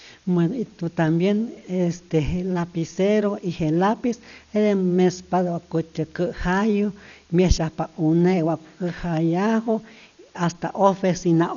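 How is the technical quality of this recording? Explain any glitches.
The technical quality is poor: a steady hiss and a dull, rough codec coloration run through the whole speech recording.

Low bit depth with dither, throughout: an even, constant hiss sits about 35 dB below the speech, with no grinding distortion. The signal appears to be reduced to about 9 bits, with random dither added before rounding, which turns the quantisation error into uniform white noise.

Dolby Digital compression, throughout: the speech sounds dull and muffled, with nothing above 7 kHz, and a rough, fluttering noise clings around voiced tones. This is likely AC-3-style coding at a very low bitrate, near 48 kbps. The encoder cuts the bandwidth and leaves many frequency lines without mantissa bits, so the decoder fills them with noise.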